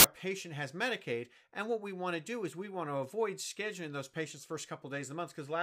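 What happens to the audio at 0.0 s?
At the very start, from 0.00 to 0.04 s, the file tags are played as audio: the compressed data of an embedded cover picture is read as samples, giving a hard-edged burst of very loud white noise. The waveform shows a solid high-level block, and the spectrogram shows an even band across all frequencies.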